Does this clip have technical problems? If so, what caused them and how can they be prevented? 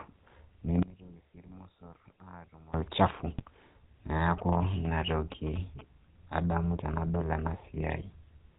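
Yes. Throughout the clip the speech has passed through the GSM full-rate codec. It models the vocal tract and excites it with a regular pulse train built from only every third excitation sample, discarding everything above 4 kHz. The sound fits the 13 kbps full-rate coder. The voice is dull at the top, with a plainly audible buzzy, gravelly roughness riding on it. To prevent this, carry the call over a wideband codec such as AMR-WB or EVS instead of legacy full rate.

From 3.31 to 3.42 s, GSM bit errors appear. Corrupted bits on the radio link reached the decoder and scrambled its filter, pitch and gain parameters for a handful of frames. The damage spans about 0.11 s, which fits roughly five bad 20 ms frames. For that stretch the speech breaks up into a squawking, gargling burst with sudden jumps in level. Better signal strength or stronger channel coding with bad-frame muting would keep those errors out of the audio.

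From 4.38 to 5.81 s, GSM signalling bursts from a nearby 2G phone are heard. Its transmitter sent clustered radio bursts, and the recording chain's audio circuitry rectified that RF into the signal. The result is a galloping dit-dit-dit of short buzzes at a 217 Hz repeat rate, sitting roughly 15 dB below the speech. Keeping phones away from microphones and cables, and using shielded, RF-filtered inputs, prevents it.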